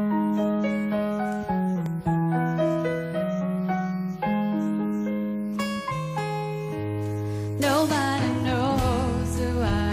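At 1.86 s there is a block of digital silence lasting about 0.73 ms, which fits a 32-sample buffer left unfilled. The output drops straight to silence and returns with no fade, so the waveform jumps abruptly at both edges. At this length the two discontinuities merge into a single sharp tick rather than an audible hole. The likely cause is the playback path missing a deadline and leaving that short stretch empty.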